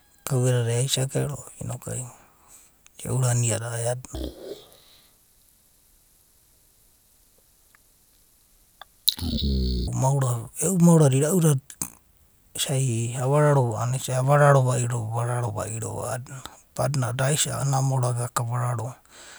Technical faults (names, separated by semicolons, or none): stereo read as mono